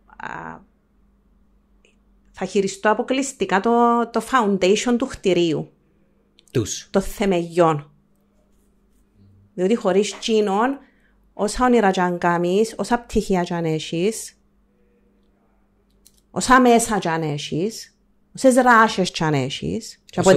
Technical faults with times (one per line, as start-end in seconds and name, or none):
16.51-16.76 hard clipping
18.46-18.82 hard clipping
20.27-20.32 hard clipping